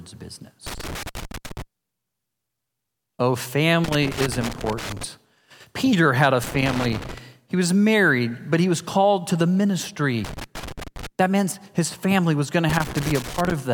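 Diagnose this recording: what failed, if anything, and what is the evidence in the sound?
A loose connector in the analogue wiring is crackling across this speech clip in five separate bursts: 0.67 to 1.62 s, 3.84 to 5.04 s, 6.44 to 7.18 s just after "had a", 10.24 to 11.07 s, and 12.69 to 13.52 s following "family was going to". Each burst is irregular crackle and scratching, not a steady tone. A worn or dirty contact is intermittently breaking the signal path, chopping the audio, and any DC on the line adds clicks at each make and break.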